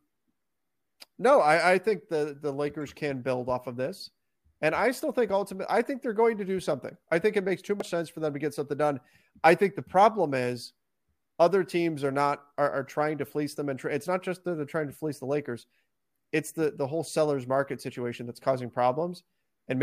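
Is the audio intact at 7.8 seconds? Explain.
No. From 7.80 to 7.82 s, between "think it makes too" and "sense for them to", there is a brief glitch. This is damaged data in a compressed stream: corrupted bytes made the decoder misread those frames and lose sync until it found the next frame header.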